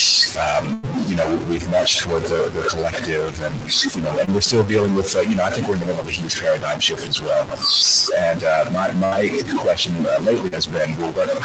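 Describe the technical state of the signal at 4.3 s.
Around 4.25 to 4.29 s there is a short concealed packet loss. About 20 ms of the call arrived too late for the decoder, and the receiver covered the gap with 22 ms of synthesised continuation before blending back into the real signal. It is heard as a brief smear or wobble on the speech, not a silence. That sets it apart from a plain dropout, which would leave a hard gap and a click rather than a smooth, slightly unnatural stretch.

The moment also falls inside a long stretch, from 0.27 to 7.65 s, where the noise suppressor cuts into the speech itself. Across roughly seven seconds it mistakes quiet speech energy for background and pulls it down along with the noise, by about 17 dB at its deepest. Soft consonants and word endings come out swallowed or faint. Unlike packet loss, nothing is replaced. The speech is simply turned down while it keeps its timing and shape.

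Noise suppressor artifacts run through the whole clip, and 4.3 s is no exception. The suppressor works band by band, frame by frame. The room noise, about 18 dB under the speech, sinks in the gaps and swells back beneath the voice. This is a constant texture across the clip, not a single event like the concealment, and it is separate from the Opus bandwidth edge at 8 kHz.

A grainy or buzzy distortion also sits on the signal throughout, and the quiet passages are filled with a noise floor that tracks the waveform's sign instead of staying steady. The likely cause is a stuck bit: one bit of each sample held at a fixed value, so about half the samples are off by that bit's weight. Unlike suppressor flutter, this grit is tied to the waveform itself and does not come and go with the background level.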